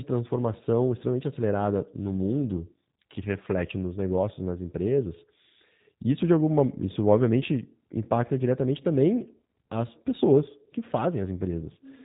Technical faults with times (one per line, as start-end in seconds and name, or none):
0.00-12.05 G.729 codec